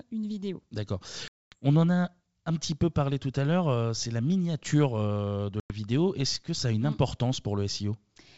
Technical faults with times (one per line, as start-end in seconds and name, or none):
1.28-1.56 packet loss on an ADPCM call
5.60-5.75 packet loss on an ADPCM call